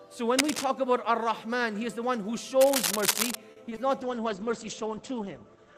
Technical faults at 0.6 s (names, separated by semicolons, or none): cable scratch noise